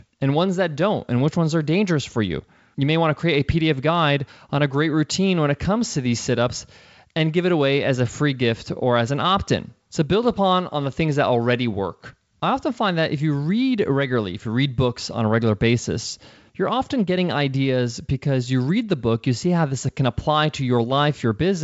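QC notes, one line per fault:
No faults found; the speech carries the G.722 wideband character, with content stopping near 7.7 kHz and coding traces at most faint, which fits the codec's full 64 kbit/s mode.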